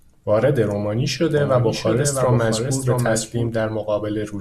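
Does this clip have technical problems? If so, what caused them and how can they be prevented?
Yes. Just after "وارد رومانی", from 1.37 s to 3.49 s, there's a doubled audio track: a second full-band copy of the speech sits roughly 0.7 s behind the original, about 5 dB quieter, with no reverb or room colour, and it cuts in and out abruptly at both ends. That's likely the same signal reaching the mix twice, once through a slower path. To prevent it, monitor or route each source through only one path into the mix.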